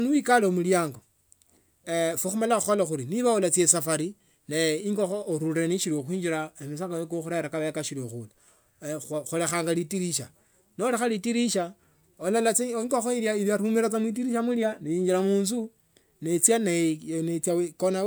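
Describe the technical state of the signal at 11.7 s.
At 11.7 s the speech signal is intact, with no dropout, clipping, glitch or other fault audible at that moment.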